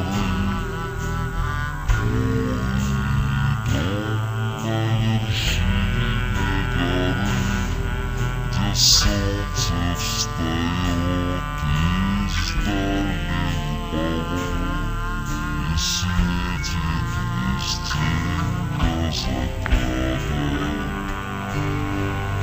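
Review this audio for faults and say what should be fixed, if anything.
Stereo read as mono runs through the whole clip. Interleaved left and right samples are being played back one after another as a single channel. Everything comes out at half speed and a full octave low, 12 semitones down. To prevent it, read the channel count from the file header and de-interleave before playback.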